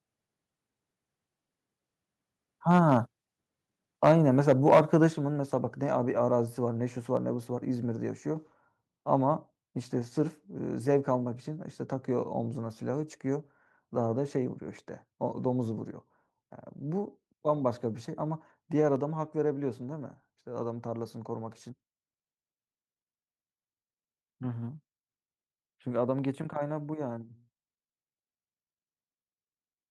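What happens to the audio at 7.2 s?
At 7.17 s the microphone volume is stepped down: the speech and background drop by about 2 dB at once, likely the call software trimming the input gain.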